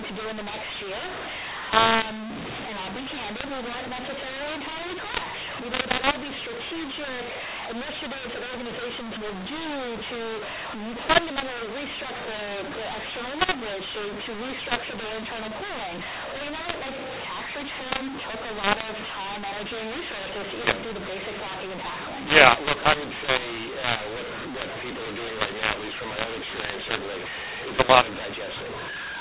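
A telephone speech recording was encoded with G.711 A-law but decoded as mu-law, a mu-law and A-law mix-up present for the whole clip. Because the two logarithmic scales map codes differently, levels come out scrambled: the speech turns harsh and distorted, and pauses fill with noise as the quietest samples are lifted above silence.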